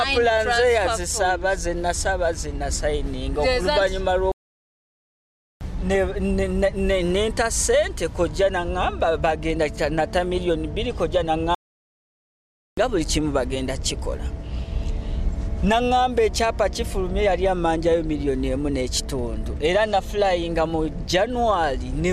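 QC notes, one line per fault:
4.32 to 5.61 s, playback stall: the sound stops in mid-flow and the output goes fully silent for about 1.3 s. The player most likely ran dry of data or had its thread blocked. This differs from a dropout or gap, which is a brief hole of milliseconds.
11.55 to 12.77 s, playback stall: the same dead silence of about 1.2 s cuts into continuous sound.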